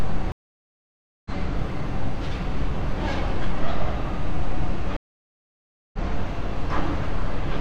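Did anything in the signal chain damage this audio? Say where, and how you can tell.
Yes, network: two stream reconnects. Gaps at 0.32–1.30 s and 4.97–5.98 s, then a fresh decoder resumes mid-stream, skipping ahead roughly a second and 0.7 s respectively.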